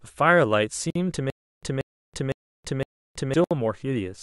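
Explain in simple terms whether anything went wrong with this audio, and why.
Two problems show up in this speech recording.

First, the recording was likely put together from separately compressed pieces, and the joins were never tidied. Each compression pass leaves a sliver of empty padding at its edges, and that padding stayed in. You hear it as a gap at a join of encoded pieces: a sudden hole in the sound at 0.90 to 0.95 s, about 52 ms long, and another at 3.44 to 3.51 s, about 66 ms. The speech then picks up exactly where it left off.

Second, between 1.30 and 3.34 s the playback likely stalled and kept retrying. Each time it replayed the last fragment it had, then ran dry. The result is a stutter with silent gaps: the same 183 ms snippet repeats four times, each followed by about 326 ms of dead silence, so it returns roughly every half second. Whatever should have played during that stretch is simply gone.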